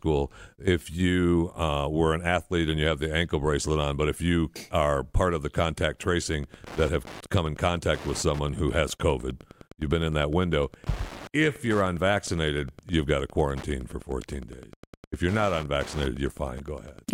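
At 6.26 s, just after "part of the contact", Wi-Fi interference begins and runs to the end at 17.13 s. A nearby Wi-Fi radio is coupling into the audio circuit. The circuit rectifies its beacon transmissions into audible pulses. The beacons repeat every 102.4 ms. The result is a steady ticking, nearly ten clicks per second, under the speech. It sits at about 20 dB below the speech.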